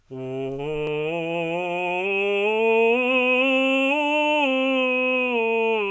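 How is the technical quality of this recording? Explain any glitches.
No technical faults can be heard in the music.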